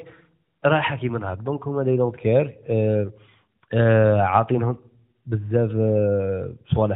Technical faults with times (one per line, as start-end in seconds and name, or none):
none